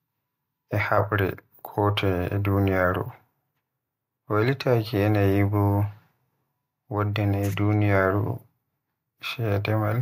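No technical faults can be heard anywhere in this speech recording.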